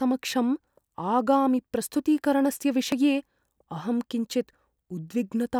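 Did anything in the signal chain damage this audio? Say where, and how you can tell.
Yes. The speech skips forward at 0.95, 2.92 and 4.90 s, each time losing a very short slice of sound, around 20 ms, with the two sides butted together and no gap of silence. The even spacing of about 2 s points to the recorder or buffer stage, which likely drops a little audio each time it closes one 2-second chunk and opens the next. This is audio missing between chunks.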